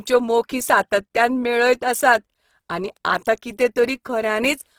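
From start to finish the speech carries plainly audible Opus compression damage, likely from encoding in the music-oriented CELT mode at a low rate, which fits about 16 kbps. Each band keeps its overall energy, but detail the encoder cannot afford is filled by folding lower bands or with noise, so the speech turns grainy and rough. That filling is the distinction from MP3 artefacts: there are few spectral holes and little swirling. Bandwidth stays fullband, up to about 20.4 kHz.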